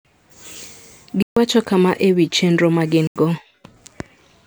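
Speech clip with two blocks of digital silence: about 141 ms at 1.22 to 1.37 s, and 85 ms at 3.07 to 3.16 s, each a hard cut to silence. The second fits a 4096-sample buffer, pointing to output not being filled in time.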